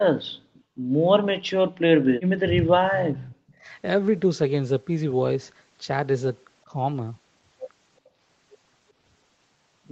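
At 0.54 to 0.63 s an echo leak is likely: the far end's echo canceller let its loudspeaker pickup through, returning a faint copy about 35 dB down, delayed 373 ms. From 2.43 to 3.38 s, speech is suppressed in double talk as the canceller likely mistakes the talker for echo and ducks it, dipping by up to about 30 dB in pieces. The same leak returns briefly at 3.48 to 3.54 s, and another milder duck, about 15 dB, follows at 3.55 to 3.72 s. A last faint echo scrap, about 40 dB below the speech, appears at 8.05 to 8.09 s, all within the call path's 8 kHz audio bandwidth.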